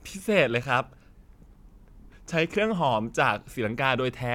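No technical faults can be heard anywhere in this speech.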